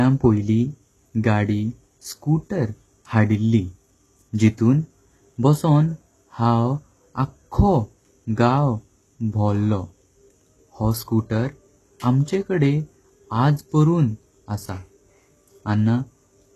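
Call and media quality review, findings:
Gritty, metallic sibilants and a lispy edge on s sounds throughout the speech; treble synthetic, nothing above 12.3 kHz. Likely HE-AAC compression at a low rate, about 16 kbps, upper band rebuilt by spectral band replication, harmonics misaligned.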